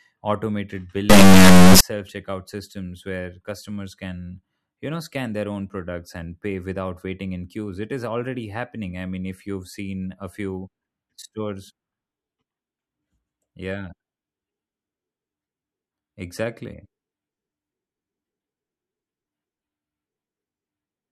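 Between 1.10 and 1.81 s, just before "checkout systems", the speech suffers an integer read as float fault: samples stored as 32-bit integers are being interpreted as 32-bit floating-point values, which is what the sound points to. The reinterpreted bit patterns become either tiny numbers near zero or enormous values far past full scale, so the output slams between silence and the clipping limit, producing a harsh, extremely loud square-wave buzz that collapses to silence wherever the speech is very quiet.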